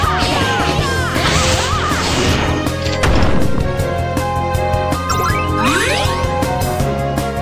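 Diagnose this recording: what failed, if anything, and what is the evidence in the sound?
Nothing failed, and nothing in the sound gives evidence of a fault at any stage.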